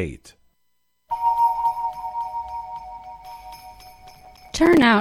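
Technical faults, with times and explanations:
4.11–4.82 s: processor overload crackle, repeated missed deadlines on buffers of roughly 5 ms leave about twenty silent gaps with hard edges, heard as gritty crackle.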